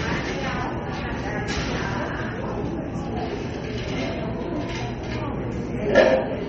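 Across the whole clip the sound carries MP3 compression damage that is plainly audible. Nothing is heard above about 8.2 kHz, so the top end sounds dull. Weak detail flickers, giving a watery swirl. This likely comes from encoding at a low bitrate near 32 kbps.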